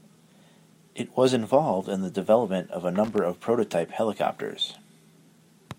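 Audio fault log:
3.04–3.18 s, loose connector crackle: a brief, irregular burst of scratchy crackle lasting about 0.14 s, falling between "the development of a" and "of prototype helicopters". The ragged, uneven texture points to a worn or dirty contact in the signal path that moved and repeatedly lost and regained connection. Each break chops the audio for an instant, and this rapid, random switching produces the gritty scratching rather than a single clean click.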